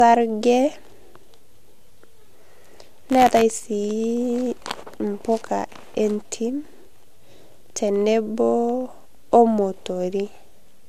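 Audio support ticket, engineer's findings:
Speech band: nothing above 14.5 kHz throughout, first-pass codec artefacts retained. Likely low-bitrate audio saved at a high bitrate: earlier lossy pass, probably AAC around 64 kbit/s, re-encoded to MP3 256 kbit/s. Removed detail unrecoverable.

Buffer tearing, 2.61–3.42 s: robotic buzz at 93.8 Hz, present only under speech. Rate fits a 512-sample buffer. Writer and reader pointers crossing each period, splicing a small slice of audio from roughly 20 ms earlier with hard edges.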